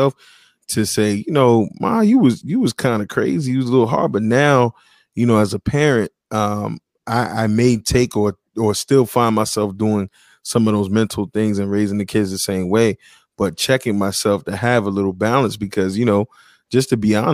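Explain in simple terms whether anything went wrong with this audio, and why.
Nothing went wrong with this speech recording: the signal stays steady and intact the whole way, with no dropouts, interruptions or other technical problems to be heard.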